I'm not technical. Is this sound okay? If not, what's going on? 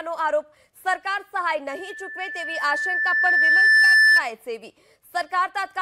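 No. From 1.70 s to 4.24 s there is loudspeaker feedback squeal. A microphone is picking up the loudspeaker it feeds, so the sound loops round and round, and one pitch, about 1.8 kHz, gets louder on every pass. You hear a single whistling tone that swells over roughly two seconds until it sits well above the rest of the sound, then stops at 4.24 s.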